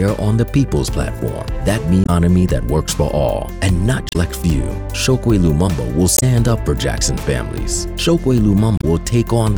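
Four short glitches break through the audio, at 2.03 to 2.10 s, 4.09 to 4.16 s, 6.15 to 6.23 s and 8.77 to 8.84 s, each lasting about 70 to 80 ms. These are the marks of damaged data in a compressed stream: corrupted bytes in the encoded file make the decoder misread the affected frames and lose sync until it finds the next valid frame header.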